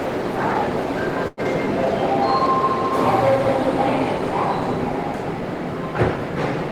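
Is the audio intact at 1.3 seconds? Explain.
No. From 1.27 to 1.40 s the sound briefly hangs, one moment drawn out with a faint buzzy dip. This is a short stall from a late packet: the jitter buffer ran dry, so about 99 ms was stretched until the data arrived, and playback then resumed roughly 99 ms later, with nothing lost.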